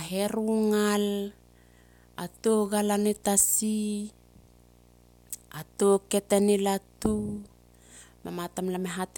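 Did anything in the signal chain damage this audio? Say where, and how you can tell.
Yes. A video or display buzz runs through the whole speech clip, picked up in the analogue wiring: a 60 Hz field-rate buzz with hash above it, about 30 dB below the speech. A nearby screen or video cable is coupling its picture-refresh energy into the audio path.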